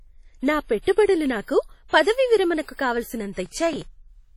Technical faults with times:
0.00-4.37 WMA compression
3.46-3.82 processor overload crackle

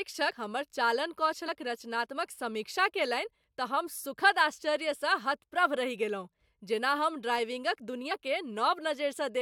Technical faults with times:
1.47 compressed frames skipped
8.11 compressed frames skipped

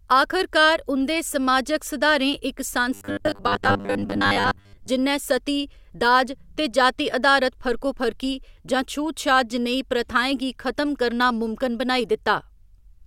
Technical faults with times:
2.94-4.89 robotic sound from repeated short buffers

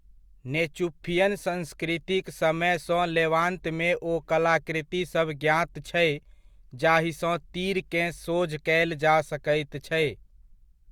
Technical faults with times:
none

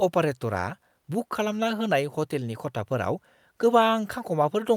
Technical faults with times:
none

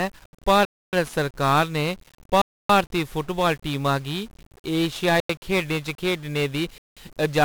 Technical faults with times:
0.00-7.45 1-bit DFPWM compression

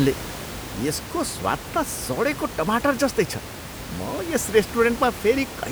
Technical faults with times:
none

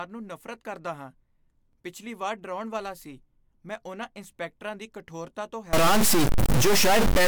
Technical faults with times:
5.73-7.28 stuck bit

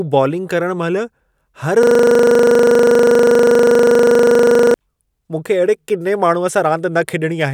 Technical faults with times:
1.83-4.74 system hang loop

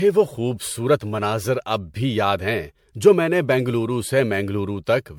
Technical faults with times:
0.00-5.18 generation loss

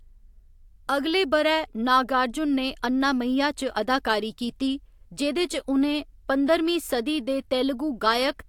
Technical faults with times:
none

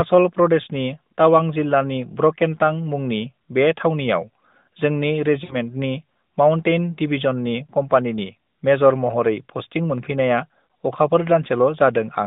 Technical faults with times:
5.44-5.56 lost AMR speech frames
10.66-10.69 lost AMR speech frames

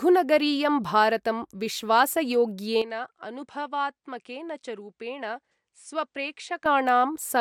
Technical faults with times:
2.82-6.66 input switched to a poorer device

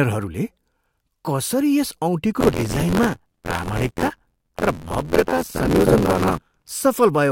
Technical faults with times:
2.40-6.69 buffer tearing

